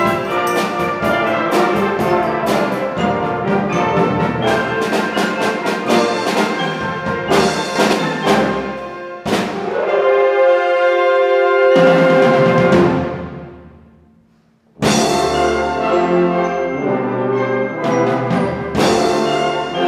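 At 7.76 s a sudden gain jump lifts the sound and its noise floor together by about 5 dB until 7.93 s, likely from a gain change applied without a ramp.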